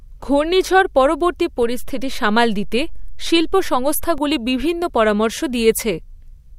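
Speech with a DC step: at 1.63 s the waveform's zero line jumps by about -22 dBFS and returns at 4.18 s, each edge a low thump showing as a broadband vertical stripe.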